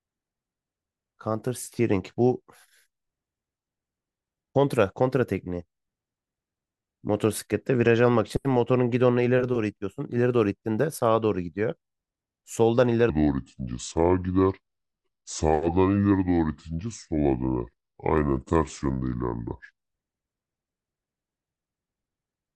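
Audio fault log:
13.10–19.78 s, section at the wrong speed: for about 6.7 seconds the speech runs at roughly 0.685 times its proper rate, so it turns slow and deep, dropping by around seven semitones, and then snaps back to normal. The likely cause is this stretch being played against the wrong clock. Timing and pitch sink together. A pure pitch shift would lower the voice but keep its pace, and a time-stretch would slow it while leaving the pitch alone.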